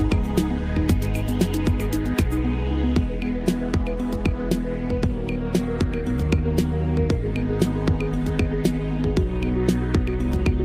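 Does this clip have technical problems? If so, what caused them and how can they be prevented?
No, nothing stood out as a technical problem on listening, so there is nothing here that needs preventing.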